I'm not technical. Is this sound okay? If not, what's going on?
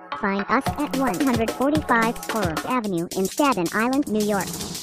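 No. The whole clip has a wrong sample rate problem. The sound was captured at one speed and is being played back faster, with nothing to correct for it. Everything runs about 1.38 times too fast. The pitch rises by about five and a half semitones, so it sounds high and hurried. The amount fits audio recorded at 32 kHz but played as if it were 44.1 kHz.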